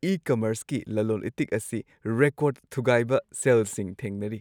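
Speech, with nothing technically wrong on listening: no dropouts, clicks, distortion or timing problems can be heard anywhere in it.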